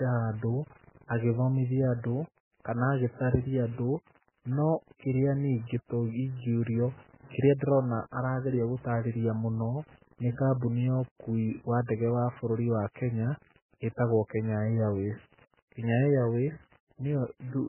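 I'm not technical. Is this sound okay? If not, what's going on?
No. Two problems run through the whole speech clip.

The first is grit. Quiet moments sound rough and grainy, as if sand were mixed in. This is likely low bit depth without dither. The sound was stored with very few levels, and it sounds like about seven bits.

The second is a thin, watery tone with heavy damage. Nothing is left above 3 kHz, so it sounds muffled, and sharp sounds smear. This fits MP3 compression squeezed far too hard, which throws away much of the detail.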